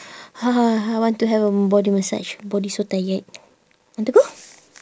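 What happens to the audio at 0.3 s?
Nothing goes wrong at 0.3 s; the speech there is intact and continuous, with no dropout, click, distortion or other fault.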